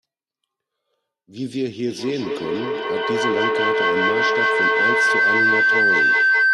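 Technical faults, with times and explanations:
1.87–6.54 s, feedback howl: a piercing tone near 1.5 kHz swells to about 9 dB above the speech, with the loop repeating roughly every fifth of a second until the end. Two devices share a room and call, so each microphone-to-loudspeaker trip adds gain instead of fading.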